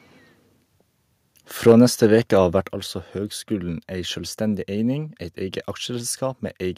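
From 1.67 to 2.06 s, just before "veke av vert altså", the loudest syllables of the speech turn harsh and crackly, with a gritty, flattened edge on the peaks. This is microphone overload: the input was driven roughly 4 dB past the converter's ceiling, so the tops of the waveform were sliced off on a small share of samples, around one or two percent. The likely cause is the microphone's input volume being set too high.

Inside that distorted stretch, at 1.72 s, the voice and background drop together by about 3 dB. A second, larger drop of about 6 dB follows at 2.73 s, between "veke av vert" and "altså høgskulen ei sjølvstendig". Both are sudden single steps rather than smooth fades, which points to the microphone volume being stepped down. The call software most likely reacted to the clipped peaks by cutting the device's input gain outright.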